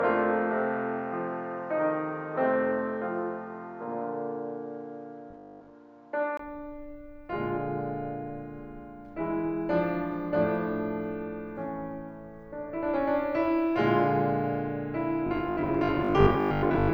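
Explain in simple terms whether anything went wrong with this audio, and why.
From the start until about 6.39 s, the music sounds duller and boxier. Then, after a gap of about 20 ms, it suddenly opens up, shifts a little in loudness, and loses a faint background hiss. That points to an input switched to a poorer device, likely a different microphone or a headset. A filter or heavy compression would change only the brightness, but here the tone, level and background noise all change together at one moment, with a short silence.

There is also robotic sound from repeated short buffers, from 5.31 to 5.75 s and from 15.27 s to 16.93 s. The music turns into a stiff metallic buzz at about 50 Hz while still roughly following its shape. This likely happens because audio arrived too slowly, so about half the time the software replayed the last slice again, which fits a 20 ms buffer. Unlike a steady mains hum, the buzz comes only in these bursts and moves with the music.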